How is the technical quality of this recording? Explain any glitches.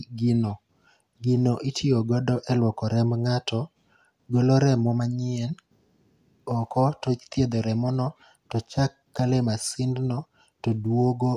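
The recording has no technical glitches, and the signal stays continuous and stable all the way through.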